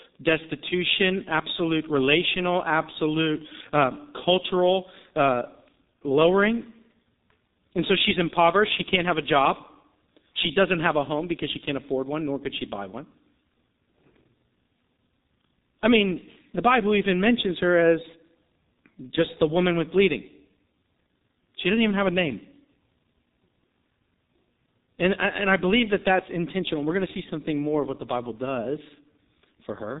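From start to finish the speech has been through the G.723.1 codec, and it shows. Nothing gets past about 3.8 kHz, so the top end is gone and everything sounds muffled. The codec models the voice in fairly long chunks and updates that model slowly, which smears consonants and leaves a hoarse edge. The damage is heavy, consistent with a bitrate of around 6 kbit/s.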